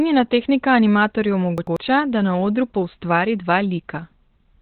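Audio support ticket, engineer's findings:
Muffled, hoarse throughout, nothing above 4.3 kHz; likely Opus compression in speech (SILK) narrowband mode at about 12 kbps. Hoarseness rules out a plain low-pass.

Chunks out of order, 1.58–1.77 s, between "tehnika animatorju" and "da na odru poustvari": a 93 ms segment plays one chunk late. Garbled, but nothing missing, unlike a dropout.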